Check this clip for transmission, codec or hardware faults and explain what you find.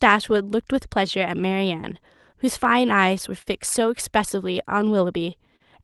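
Three timing faults are present.

Clock drift between sender and receiver runs through the whole clip: the sender's audio clock is about 3 percent slower than the receiver's, so the jitter buffer keeps draining. The result is faint, recurring timing unevenness rather than any single obvious glitch.

Repeated timing corrections span 0.08 to 4.99 s. To compensate for the slow sender, the receiver keeps stretching short pieces, running the audio at 98 percent speed and adding roughly a tenth of a second overall. This is heard as a slightly unsteady, dragging tempo with small, unevenly spaced hiccups.

There are two short stalls from a late packet, at 3.42 to 3.48 s and at 5.56 to 5.62 s. Each time, the buffer ran empty and the receiver held the last sound, for 43 ms and then 38 ms, until the packet arrived. Nothing is lost, but the sound hangs briefly with a slight buzzy dip.

The call codec's band limit near 12 kHz and its coding texture fit Opus at about 32 kbps.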